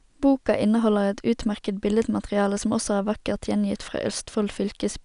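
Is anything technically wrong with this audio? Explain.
No, nothing in this speech recording stands out as a technical problem, so there's really nothing to flag here.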